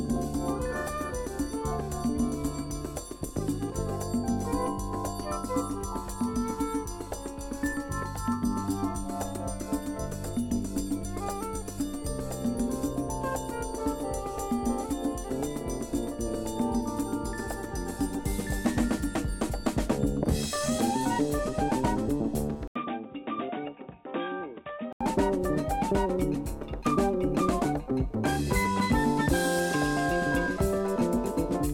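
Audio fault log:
22.68–25.01 s, input switched to a poorer device: after a brief 80 ms gap, the sound goes dull and boxy, with nothing above 3.8 kHz, drops roughly 10 dB in level, and picks up a faint new noise floor sitting well below the signal. Then at 25.01 s the full band and level return. The likely cause is the recording hopping over to a narrower-band mic or a headset's call profile, then switching back.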